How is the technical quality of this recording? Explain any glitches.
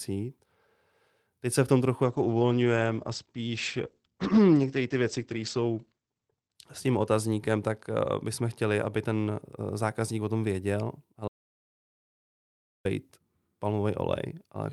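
The recording has two clear glitches: a long stretch of degraded speech, then a full cut to silence.

From 2.05 to 9.47 s, right after "se v tom trochu", there is a call bitrate drop. The sound quality suggests the encoder fell from about 48 kbps to about 11 kbps. It sat at its lowest for about 4.3 s. With so few bits, the codec quantises coarsely. It also narrows the audio band from 20 kHz to 8 kHz. The speech turns muffled and rough. Clarity returns before "eh zákazník o tom".

From 11.28 to 12.85 s, just after "zákazník o tom věděl", an audio dropout to silence occurs. The sound stops abruptly for about 1.57 s. The gap is silent, with no room tone at all. The likely cause is lost input, such as a failed link or brief mute, while silence kept being written. Whatever was said in that span is gone.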